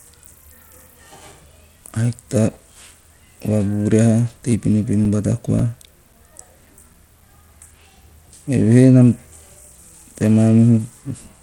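Throughout the speech, gritty grain and unsteady treble point to coarse sub-band quantisation, likely Bluetooth SBC compression at a low bitrate near 96 kbps. Content extends to 20.9 kHz.

From 0.78 to 2.67 s and again from 4.51 to 8.01 s, CD scratch ticks recur about four times per second, each a few milliseconds, where unrecoverable disc errors get patched.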